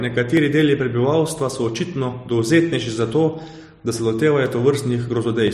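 Regular ticks from 0.37 s to 5.48 s, every 1.02 s, are periodic USB or driver dropouts: brief stalls skip well under a millisecond of speech.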